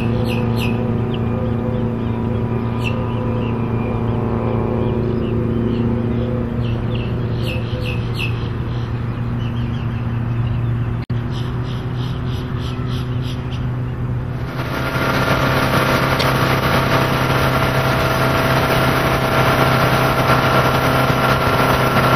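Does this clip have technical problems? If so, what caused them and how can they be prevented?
Yes. MP3 compression runs through the whole clip, with plainly audible codec damage: a watery, swirling texture where weak frequency components drop in and out from frame to frame, and softened attacks. The likely cause is an encoder short of bits, which fits a low bitrate of around 64 kbps, so it discards detail its hearing model rates as less important and trims the treble. Encoding at a higher bitrate, or keeping a lossless copy, prevents this.

Damaged data in a compressed stream appears at 11.01 to 11.11 s and again at 16.19 to 16.23 s. At each point part of the compressed data was wrong or missing. The decoder could not read those frames, lost sync and searched for the next valid frame header, leaving a brief disturbance in the sound and a possible skip forward. Verifying transfers with checksums and using a transport that resends lost packets prevents these breaks.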